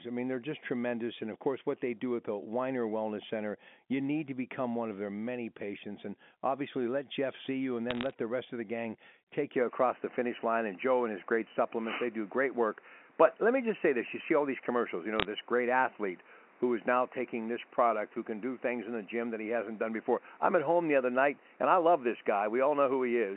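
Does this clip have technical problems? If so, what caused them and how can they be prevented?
Yes. Bit errors on a digital phone line show up as bursts of sharp ticks and crackle from 7.91 to 8.13 s, right after "see you and" and before "the rest of the", and again from 15.20 to 15.25 s. Flipped bits in the G.711 stream corrupt single samples, and at a bit error rate of about 0.2% they land as clicks. Unlike packet loss, nothing drops out and the speech underneath stays intact. A cleaner line or a link with error correction would prevent them.

An input switched to a poorer device is the likely cause of the change at 9.56 s, just after "of the gang take", lasting to the end. The sound turns dull and boxy, with nothing above 3 kHz, and a new background noise sits about 35 dB under the speech. The G.711 line itself passes up to 3.5 kHz, so this narrower band comes from the new input rather than the phone line. 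There is no gap and no level jump at the switch, which points to another input device taking over, not a dropout. Locking the recording input to one device would prevent it.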